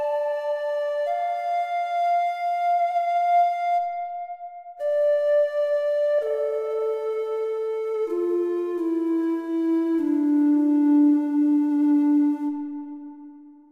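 There are no technical faults to describe at any point in this recording of sounds.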